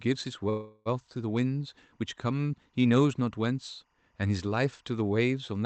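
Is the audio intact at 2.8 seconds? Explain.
No. At 2.8 seconds, as across the whole clip, the speech carries timecode bleed. Linear timecode from an adjacent track or cable has leaked into the audio. Its square-wave code flips between tones near 1 kHz and 2 kHz, with the pattern repeating at a rate that fits 23.976 frames per second. The result is a faint, steady chirping warble sitting far below the speech, roughly 45 dB down.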